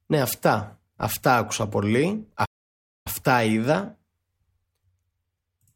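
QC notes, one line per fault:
2.45–3.07 s playback stall: the player likely ran dry of data or was blocked, so the speech drops to silence for 605 ms, then resumes.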